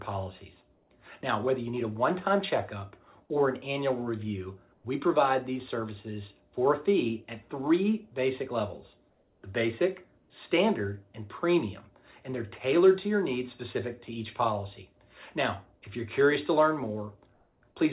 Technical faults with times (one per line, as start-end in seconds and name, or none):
0.76-0.90 comfort noise in place of the background
9.10-9.42 comfort noise in place of the background
10.18-10.30 comfort noise in place of the background
17.34-17.62 comfort noise in place of the background